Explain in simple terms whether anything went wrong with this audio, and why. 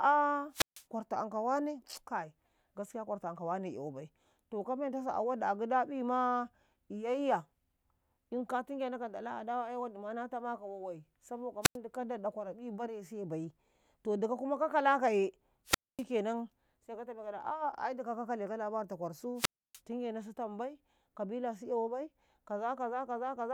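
The speech drops out four times, and each one is a wireless microphone squelch dropout. The radio link from the mic weakened, so the receiver muted itself instead of passing along static. You hear a quick burst of hiss, then a silent gap, then the speech returns. The gaps are at 0.51–0.85 s, at 11.62–11.77 s right after "na tamaka wawai saboka", at 15.65–16.04 s, and at 19.35–19.81 s. The silent stretches last roughly 0.1 to 0.3 seconds.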